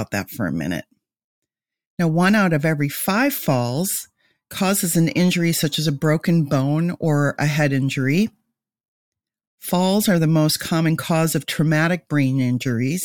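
No technical faults can be heard anywhere in this recording.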